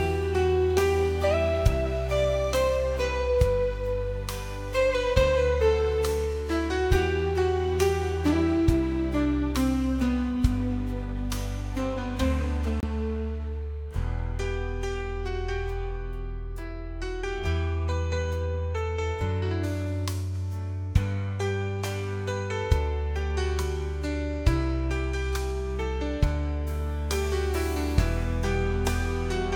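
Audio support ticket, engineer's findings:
Dropout at 12.80–12.84 s, about 27 ms of silence, then audio resumes. Likely a Bluetooth stall: headphone buffer ran dry while delayed packets were resent.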